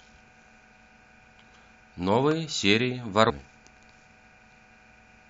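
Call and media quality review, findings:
Sharp snap at 2.31 s, sitting on top of the speech rather than replacing it. Electrical switching spike, likely from a nearby switch, motor or static discharge arcing briefly and being picked up on the audio line.

Skip at 3.29 to 3.31 s, with the speech jumping ahead by roughly 200 ms. Compressed frames skipped: about ten frames, consistent with 23.2 ms frames, lost or rejected by the decoder.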